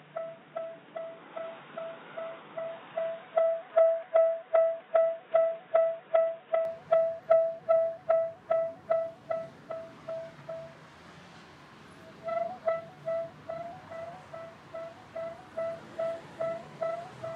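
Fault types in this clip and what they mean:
Input switched to a poorer device: from the start to 6.65 s the sound is dull and boxy, with nothing above 3.8 kHz, then opens up abruptly with no gap and no real change in loudness. The likely cause is capture moving from a narrowband input to a fuller one. On a spectrogram the upper band is empty until 6.65 s, then fills in. The waveform envelope stays even, and the early section carries its own faint noise floor, roughly 35 dB down.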